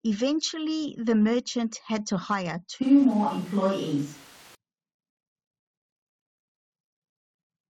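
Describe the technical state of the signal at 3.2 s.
At 3.2 s the speech sounds roomy and hollow, with thinner bass and a background noise floor sitting about 30 dB below the voice. The loudness stays roughly the same as before, and the change is abrupt, running from 2.83 s to 4.55 s before snapping back. This is likely a switch to a distant microphone. The close microphone's signal dropped out and a farther pickup took over, so it captured more room reflection and less low end.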